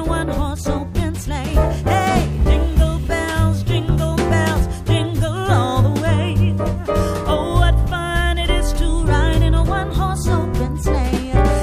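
No technical faults can be heard anywhere in this audio.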